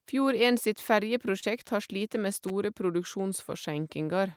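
Around 1.39 to 1.51 s, just before "har slite med", there's short concealed packet loss: a few tens of milliseconds never arrived, so the decoder extended the previous sound, leaving a quick smear. Then at 2.48 to 2.50 s, right after "har slite med", a loose connector crackle: a contact briefly making and breaking, giving a scratchy burst.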